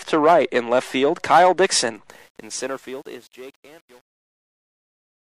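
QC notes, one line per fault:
2.09–5.23 s, truncation distortion on a fade: the fade-out loses resolution without dither, which fits an 8-bit stage. From 2.49 s the waveform collapses into coarse square steps, so the quiet tail turns gritty.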